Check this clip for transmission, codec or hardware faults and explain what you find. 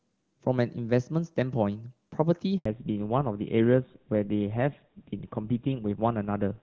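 Two faults are audible, both at the same moment in the call.

From 2.58 to 2.66 s there is a handover gap of 80 ms. As the phone switched networks, no speech frames got through, so the sound fades within a few tens of milliseconds and drops to silence until the new link picks up. Whatever was said in that window is gone. On a waveform it shows as a short flat stretch. On a spectrogram it is a thin vertical band that is empty across all frequencies.

From 2.66 s to the end there is a fallback to narrowband. Before the gap the audio carries wideband content, which fits HD Voice at a high AMR-WB rate with little or no codec damage. After the gap everything above 4 kHz disappears, which fits a switch to GSM full rate at about 13 kbit/s. The voice becomes duller and rougher. A spectrogram shows a hard ceiling at 4 kHz from 2.66 s onward, with the upper band blank.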